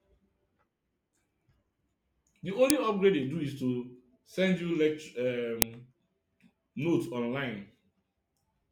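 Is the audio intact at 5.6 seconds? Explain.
No. At 5.62 s there is an uninitialised buffer fault. A block of about 1.45 ms was sent to the output before any audio had been written into it. Whatever stale values sat in that memory were played as if they were samples. The block length fits a 64-sample buffer. It is heard as a brief, loud crack.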